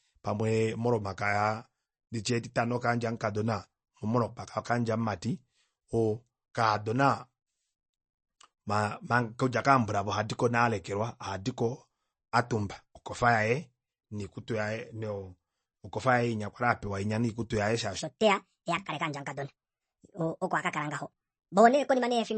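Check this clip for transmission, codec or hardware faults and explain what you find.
Two faults are present. Throughout the speech, the sound is dull and watery, with nothing above 8.3 kHz, a swirling, metallic edge on sibilants, and softened consonant attacks. The likely cause is MP3 compression at a low bitrate, around 32 kbps. Short of bits, the encoder cut all treble above a fixed frequency and dropped quiet frequency components that flicker in and out from frame to frame, which produces the swirl and the chirpy sibilants.

From 17.99 s to the end at 22.37 s, the speech suddenly runs hurried and high, about 1.49 times normal speed and roughly seven semitones up in pitch. This is a section at the wrong speed, likely from that stretch being played back against a faster clock than it was recorded with. Because speed and pitch change together, the delivery rushes and the voice turns thin and chipmunk-like at the same moment.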